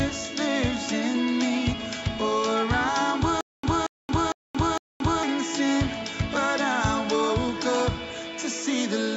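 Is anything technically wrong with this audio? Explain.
Yes. From 3.41 s to 5.23 s there is a stutter with silent gaps: a short burst of about 230 ms plays, drops to dead digital silence for about 226 ms, then the same burst comes back, repeating four times on an even cycle of roughly 456 ms. The likely cause is a stalled player or stream that replayed its last buffered fragment at each retry and then ran empty, so the audio meant for that stretch never arrives.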